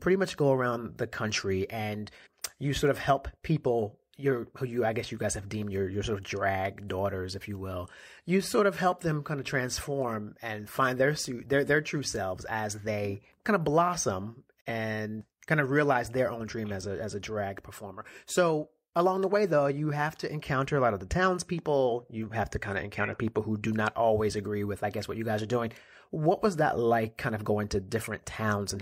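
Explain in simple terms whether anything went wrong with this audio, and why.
At 14.59 s, right after "they kind of blossom", the speech fades to silence in about 20 ms and returns at 14.70 s. This is a digital broadcast dropout: the receiver lost a brief stretch of signal, roughly 43 ms, consistent with a single bad frame, and muted until clean data resumed.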